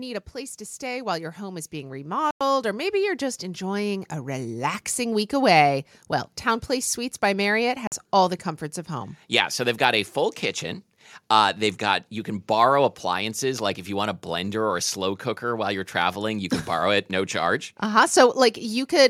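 From 0.32 s to 4.80 s, automatic gain rising lifts the level by about 10 dB. The gain control judged the input too quiet and turned itself up slowly. Speech and background swell together until the level settles before "week away well".

At 2.31 s the sound drops to silence for 0.10 s, then resumes. It happens again at 7.87 s for about 50 ms, just before "all the comforts of". Each gap is likely a Bluetooth stall, where delayed packets left the headphone buffer empty.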